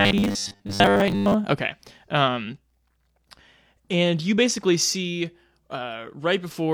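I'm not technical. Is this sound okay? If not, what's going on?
No. From 0.01 to 1.34 s the speech has robotic sound from repeated short buffers. The audio likely arrived too slowly, so the player kept replaying the last tiny slice, about 10 ms, for most of that stretch. That gives a fixed metallic buzz near 100 Hz. Unlike a dropout, there are no silent gaps, and unlike a steady hum, the buzz still follows the speech.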